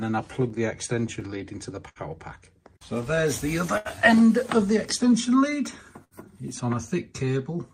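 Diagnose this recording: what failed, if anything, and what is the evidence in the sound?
Clock drift between sender and receiver runs through the whole clip, a network and buffer-stage fault. The sending clock runs roughly 5% slow, so the receiver's jitter buffer keeps draining, forcing small repairs and occasional brief stalls at uneven points.

Scattered short gaps appear between 0.49 and 1.99 s, about five of them, together filling around 100 ms, the longest near 70 ms. Lost or late packets left small holes that the receiver covered by extending the preceding sound, leaving brief smears and hiccups.

Repeated timing corrections run from 0.58 to 7.54 s, with playback effectively at 99% speed and about 100 ms added overall. The receiver keeps stretching short pieces to stay in step with the slower sender.

Short stalls from late packets occur at 3.78 to 3.88 s (76 ms), 6.04 to 6.14 s (69 ms), and 7.25 to 7.30 s (15 ms). 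Each time the buffer ran empty, the last sound was held until the packet arrived, and playback resumed without losing anything.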